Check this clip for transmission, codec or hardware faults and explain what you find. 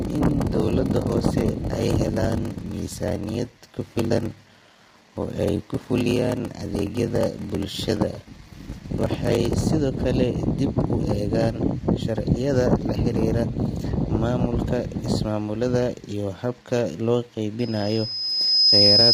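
Three faults are audible in the speech: heavy codec damage throughout, a padded block size mismatch in the first half, and a feedback squeal at the end.

Low-delay AAC compression runs through the whole clip. The damage is heavy and most likely comes from AAC-ELD at around 24 kbps. Its short frames cannot separate the voice's harmonics cleanly, and at this low bitrate too few bits remain to code them. Noise fills the gaps between harmonics, so the voice sounds rough and grainy, and the top band sounds dulled or synthetic rather than natural.

The block size mismatch (padded) runs from 0.00 to 9.62 s and ends just before "sidoo kale dib u". One stage hands over blocks shorter than the next stage reads, which fits 1024-sample writes, and the shortfall in each block is filled with silence. Those repeated gaps produce a 38.3 Hz buzz under the voice. The speech also plays at 0.889 times normal speed and sounds drawn out.

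A loudspeaker feedback squeal starts at 17.59 s, right after "ismaamulada iyo habka loo", and lasts to the end of the clip. A microphone picks up the loudspeaker it feeds, and at 5.2 kHz the loop gain rises above one. That frequency feeds on itself and swells over roughly a second into a piercing single tone, ending up roughly 10 dB louder than the speech.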